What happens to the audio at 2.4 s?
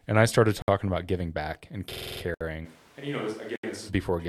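A block of digital silence runs from 2.34 to 2.41 s, a 66 ms hole where the sound drops out, which points to an output buffer that went unfilled. Unlike a fade-out or concealed dropout, it cuts off and resumes abruptly, heard as a short hole.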